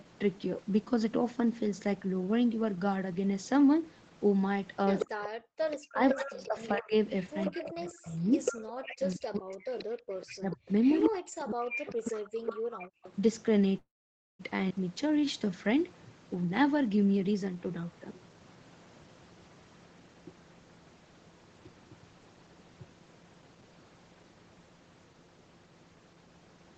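A speech recording carried over a call, with audio that tops out at 8 kHz, which points to an Opus stream at around 20 kbps, has a run of call faults through its middle. From 4.99 to 6.48 s, and again from 7.21 to 13.12 s, a second, fainter copy of the voice trails the original by 147 ms. It sits about 5 dB below the main speech in the first stretch and about 10 dB below in the second. This is an echo leak. The far end was likely on a loudspeaker, and its echo canceller let part of what its microphone picked up return down the line. Over the same span the main voice repeatedly sinks and breaks into fragments: at 5.05 to 6.94 s (around a second affected, dropping as much as about 40 dB), 7.5 to 8.16 s (about half a second, about 25 dB deep), 8.8 to 9.84 s (about a second, about 35 dB), 10.37 to 12.37 s (about one and a half seconds, about 40 dB), and a brief dip at 12.93 s. This is speech suppressed in double talk. 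Both ends were likely talking together, so the canceller could not separate its own talker from the loudspeaker echo and pulled everything down. From 13.77 to 14.41 s the sound stops for 0.62 s, mostly in silence, about 0.52 s of it, and then carries on exactly where it paused with nothing lost. This call audio freeze likely came from delayed packets emptying the jitter buffer, which filled the wait with a fading continuation before the late audio resumed. Around 14.69 to 14.72 s the audio abruptly jumps forward. Roughly 0.4 s of material is gone and the two sides are butted together with almost no gap. This is a skip ahead, where a stretch was discarded while later audio was already queued. From 15.03 to 15.79 s the speech drags at 92% of normal speed without any drop in pitch, with sounds drawn out. This is a jitter buffer slow-down: the receiver repeated single pitch periods to stretch in 65 ms and rebuild its reserve. 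Finally, from 16.35 to 17.86 s the voice hurries at 114% speed, again at unchanged pitch. This is a jitter buffer speed-up, in which the receiver cut out short pitch-period slices totalling around 0.2 s to shrink an oversized backlog.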